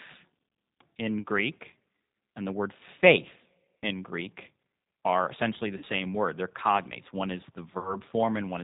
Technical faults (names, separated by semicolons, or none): G.729 codec; VoIP packet loss concealed by the speech codec